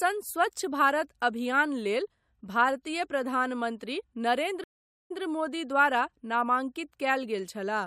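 Speech, with a stream reconnect at 4.64–5.21 s: the sound drops out for about 0.47 s, then a fresh decoder picks up 0.11 s earlier, repeating a sliver.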